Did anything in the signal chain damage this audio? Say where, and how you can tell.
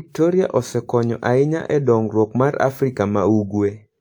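No, nothing damaged this audio.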